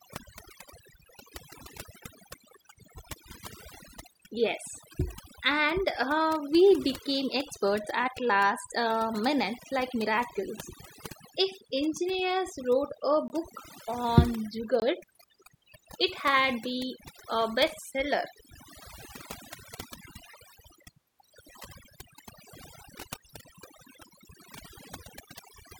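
Throughout, overdone noise removal suppresses any band near the estimated noise, leaving a lowered background with twinkling specks; spectrograms show scattered isolated time-frequency dots. At 13.28 to 13.30 s and 14.80 to 14.82 s, a block of digital silence cuts out 20 ms of audio with no fade; waveforms show flat gaps.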